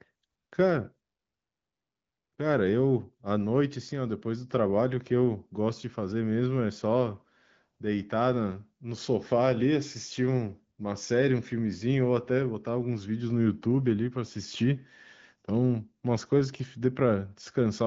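The speech comes through intact with no technical faults, carried over the AMR wideband (HD Voice) codec at a rate that sounds like about 16 kbit/s, with nothing present above roughly 7.5 kHz.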